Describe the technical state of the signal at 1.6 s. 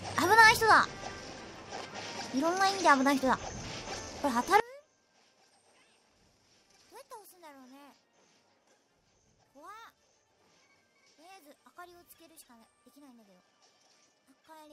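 At 1.6 s the signal is intact, with no audible dropout, distortion, clipping or other fault.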